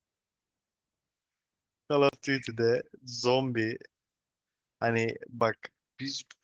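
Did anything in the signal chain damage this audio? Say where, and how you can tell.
Yes. The codec stage: Opus voice compression runs throughout, with speech sounding hoarse and slightly robotic. That points to roughly 16 kbps hybrid mode, SILK coding the band and CELT above 8 kHz.

There are two blocks of digital silence, a 40 ms hole from 2.09 to 2.13 s and a 10 ms tick at 5.40 s. That looks like a buffer left unfilled in time.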